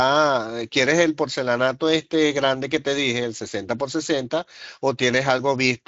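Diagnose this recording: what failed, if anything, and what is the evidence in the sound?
Nothing failed: the speech runs through a Speex codec path with the top of the band stopping near 7.6 kHz, which fits a wideband setting at a fairly generous rate, and the coding colour is light, with no stage in the chain showing a fault.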